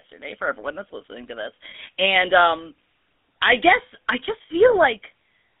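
Speech heard through the GSM full-rate codec, which fits a 13 kbps phone link. The band runs from 300 Hz to 3.5 kHz, and the pulse-driven vocal-tract model leaves a plainly buzzy, gravelly roughness. Lost GSM frames cause two brief metallic rings. The decoder repeats the last good frame. The first comes at 1.70 to 1.75 s, after "that's listening to this," and lasts 40 ms, which points to two frames. The second, at 4.42 to 4.51 s after "I guess I," lasts 80 ms, which points to four.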